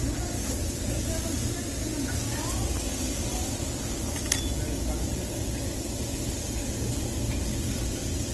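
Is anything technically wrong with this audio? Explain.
Yes. Throughout, the audio has plainly audible damage that likely comes from Opus compression in its music mode at a bitrate that fits about 16 kbps. Nothing gets through above 12.1 kHz. Starved bands are filled with folded or noise-like content, so tones come out grainy, rough and hissy rather than clean.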